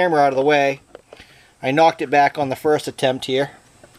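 Nothing in the audio stands out as a technical fault, so there's nothing here to walk through.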